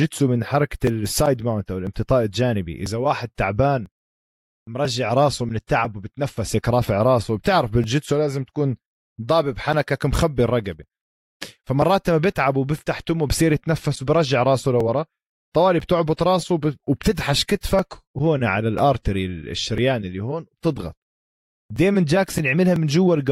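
From 0.87 s to 22.76 s, something stalls the USB bus or audio driver about once every 1.0 s, producing periodic USB or driver dropouts. Each stall skips a few milliseconds of the speech outright rather than filling the gap with silence, so the waveform jumps abruptly. Across the roughly twenty events this is heard as an evenly spaced tick or small pop, about one per second, audible wherever speech is present.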